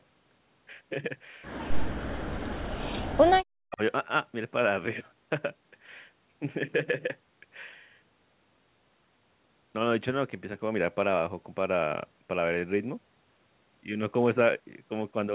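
From 1.95 to 2.96 s and again from 3.19 to 3.81 s, the speech drops away hard, down by something like 40 dB. That's likely speech suppressed in double talk, with the echo canceller ducking this talker while the far side spoke.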